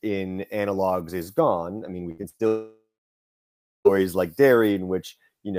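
Repeated packet loss (robotic sound) starts at 2.11 s, just after "gone I mean we", and runs to 2.41 s. Four short holes open in that stretch, the longest 61 ms, and each is patched by extending the sound just before it. About 140 ms goes missing, so nearly half of the span is filled-in sound. The speech turns choppy, with pieces clipped out.

From 2.47 s to 3.87 s the speech cuts out for about 1.38 s, likely a long network dropout in which nothing reached the receiver. The last sound is first stretched into a fading buzz lasting roughly a third of a second. For about 1.01 s after that there is only silence. The speech then resumes further along, and the lost stretch is never recovered.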